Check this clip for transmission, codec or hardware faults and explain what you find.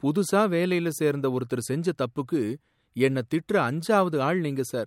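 Listening closely to the recording, nothing stood out as a problem at any point.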